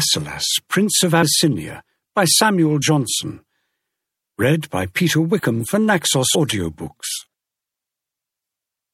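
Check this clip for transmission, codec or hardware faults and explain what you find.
Two faults are audible: codec damage across the whole clip, and three short jumps where compressed frames were skipped.

MP3 compression, throughout: the sound is watery and swirly, with faint detail flickering in and out. Those marks likely come from an MP3 encoder short of bits, which fits a low rate around 64 kbps. With too few bits, the encoder drops the treble above a fixed cutoff and zeroes weak frequency lines that change from frame to frame. That produces the plainly audible smearing and metallic shimmer.

Compressed frames skipped, at 1.22 s, 2.81 s and 6.34 s: the audio jumps forward by roughly 70 ms, 30 ms and 50 ms. Each jump points to whole frames of about 26.1 ms going missing or being rejected by the decoder, around three, one and two frames respectively. Neighbouring frames overlap, so each join comes out as a brief smeared blip rather than a sharp click.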